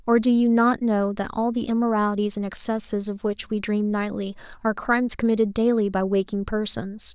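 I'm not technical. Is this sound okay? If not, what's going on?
Yes, nothing stood out as a problem when listening to this recording.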